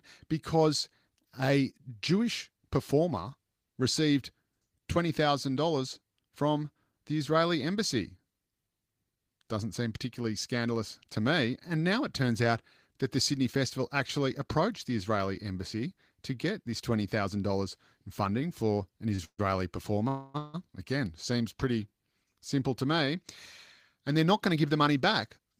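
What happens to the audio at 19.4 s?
From 19.25 s to 19.40 s the last sound is drawn out into a fading buzz that drops to silence before the audio resumes, now running about 139 ms late with nothing lost. This is a call audio freeze, likely packets delayed until the jitter buffer ran empty.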